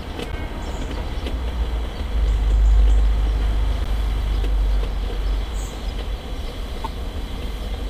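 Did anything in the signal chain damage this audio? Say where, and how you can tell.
Yes, at the codec stage: corrupt frames decoded at three points, heard as short glitches at 0.32–0.35 s, 3.84–3.87 s and 6.84–6.87 s, each peaking around -15 dBFS. Flipped bits in a frame or two made the decoder put energy at the wrong frequencies.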